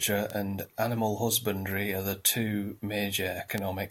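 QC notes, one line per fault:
0.30 s, 1.71 s, 3.58 s: bit error spike. One sample (two at 3.58 s) jumps to about -13 to -19 dBFS and snaps straight back, giving a bare broadband tick unrelated to the speech, unlike a splice click at a waveform join.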